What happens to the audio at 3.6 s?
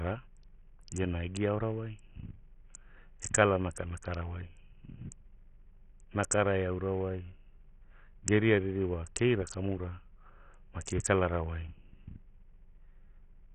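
At 3.6 s the speech carries the damage of Bluetooth SBC compression, which runs through the whole clip. Nothing sounds above about 11.4 kHz. The top bands are left without bits, so treble flickers, and gritty noise rides on the voice. This likely points to a very low bitrate near 48 kbps.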